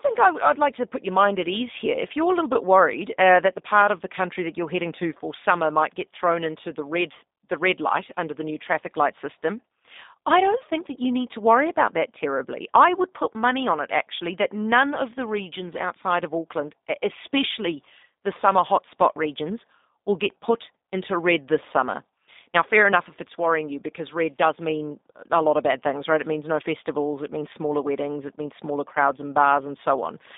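Speech passed through a G.729 codec throughout. Nothing above 3.7 kHz survives, and the roughness and synthetic edge fit an 8 kbit/s G.729 stream.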